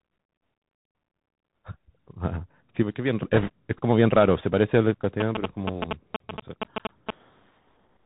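The whole speech clip passes through the Bluetooth CVSD headset codec, and the damage is plainly audible. The band stops at 4 kHz. Loud high sounds outrun the adapting step size and distort. S sounds turn scratchy, and a granular hiss sits under everything. The sound fits a 64 kbps CVSD link.

From 2.83 to 3.23 s the level drops abruptly by about 6 dB, then recovers. The same drop returns from 6.16 to 6.60 s. The likely cause is one stereo channel dropping out before the mono sum.

From 3.34 to 3.50 s there are bit errors on a Bluetooth voice link. Flipped bits at an error rate of a few percent add a rushing crackle. No single bit carries much weight, and the errors fade quickly, so there are no loud clicks.

From 5.20 to 7.11 s there are GSM signalling bursts from a nearby phone. The audio circuit rectifies the radio pulses. They come through as a galloping dit-dit-dit of short buzzes at 217 Hz, roughly as loud as the speech.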